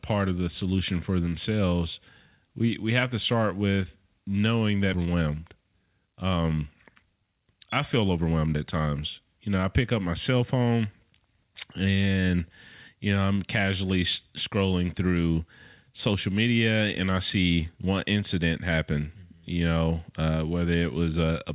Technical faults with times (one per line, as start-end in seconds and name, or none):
4.94 skip ahead
6.66-7.54 jitter buffer speed-up
7.94-8.56 jitter buffer speed-up